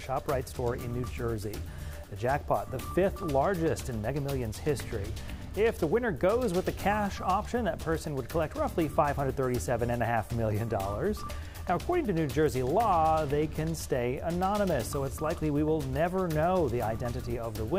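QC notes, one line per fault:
5.51 s, bit error spike: a single sharp tick here. It's very short, just a couple of samples, which fits one flipped bit in a stored or transmitted value, and it peaks at about -41 dBFS. Because the sample jumps by a power of two and snaps straight back, the energy spreads across the whole spectrum and has nothing to do with the surrounding audio, hence the clean, colourless click.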